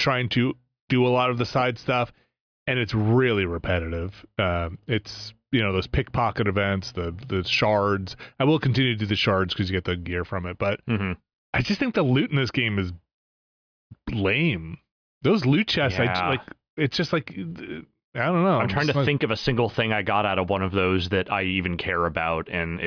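No technical faults can be heard anywhere in the recording, with the signal holding steady and intact over its whole duration.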